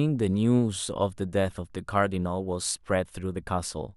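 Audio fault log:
No faults detected anywhere in the speech clip.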